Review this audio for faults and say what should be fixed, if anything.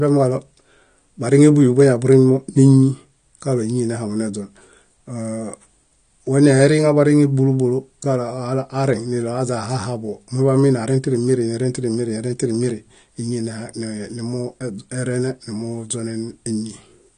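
The speech has likely been through AAC compression (AAC-LC) at a low bitrate, and the damage runs through the whole clip and is plainly audible. Starved of bits, the encoder discards the top of the spectrum, leaving nothing above 9.9 kHz, and quantises the remaining frequency bands coarsely, so sibilants turn fizzy and sustained sounds warble and smear. The degradation fits a bitrate around 32 kbps. To prevent it, encode from the original at a substantially higher bitrate, or keep a lossless copy for delivery.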